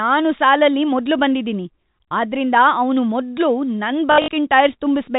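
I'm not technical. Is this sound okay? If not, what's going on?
No. From 4.12 to 4.28 s, packet loss with last packet repeated: missing chunks were filled by replaying the previous chunk, causing a brief, robotic stutter.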